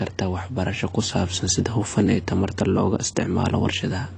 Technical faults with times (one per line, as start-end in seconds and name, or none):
0.00-4.17 AAC compression